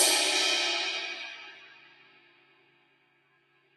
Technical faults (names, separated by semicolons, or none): noise suppressor applied to music or sounds